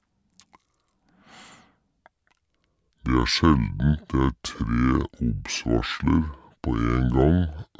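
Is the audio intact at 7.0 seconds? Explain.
No. At 7.0 seconds, as throughout the clip, the speech has a wrong sample rate: it plays at about two-thirds speed and roughly 7 semitones lower, which fits 24 kHz audio played back at 16 kHz. Tempo and pitch drop together, which tells it apart from a pure pitch shift or time-stretch.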